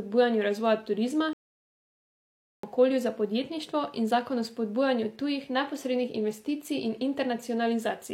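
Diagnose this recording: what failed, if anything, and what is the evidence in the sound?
A playback stall at the playback stage. The speech cuts to silence mid-flow at 1.33 s. It stays silent for about 1.30 s, until 2.63 s, then sound returns. The likely cause is the player running out of buffered data or its thread being blocked, starving the output.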